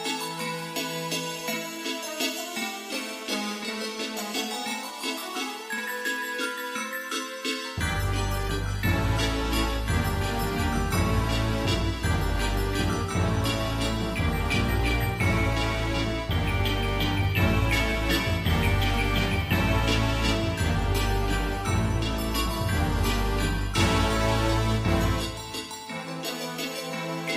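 No technical faults are audible.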